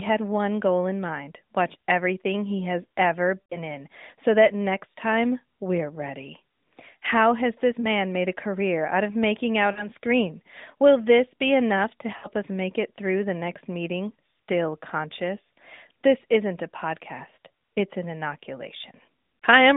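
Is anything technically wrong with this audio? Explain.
Yes. There are lost AMR speech frames at 3.42–3.58 s (after "everything he has ever"), 7.80–7.87 s, 9.72–9.88 s and 12.18–12.28 s. The decoder repeats the last good frame at falling gain, so the speech smears briefly and dips before recovering.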